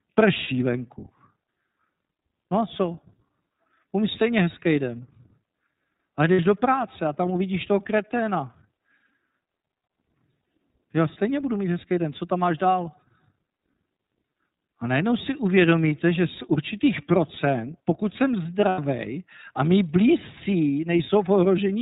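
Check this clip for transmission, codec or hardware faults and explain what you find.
Two faults are audible: band-limited, slightly synthetic coding throughout, and three brief held-vowel gaps.

Across the whole speech clip the voice sounds dull, rough and a little synthetic, with nothing above 4 kHz. This is the iLBC codec, a narrowband coder that codes each frame's excitation independently. The damage is plainly audible and fits its 13.33 kbps mode with 30 ms frames.

At 0.44 s, at 6.34 to 6.39 s just before "do práce a tam", and at 18.69 to 18.79 s just after "určitých procent pokud jsem", the speech turns into a short held, faintly buzzy vowel lasting about 30, 60 and 90 ms. These are lost iLBC frames: the decoder repeats the last pitch cycle with added noise, then recovers almost immediately.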